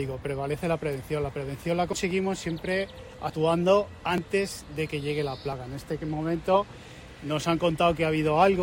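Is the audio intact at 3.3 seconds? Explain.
No. At 3.30 s there is an abrupt jump forward, roughly 70 ms of sound gone. This is likely a dropped buffer (overrun), where samples were overwritten before being read. Unlike a dropout, no silent gap appears; the two sides simply butt together.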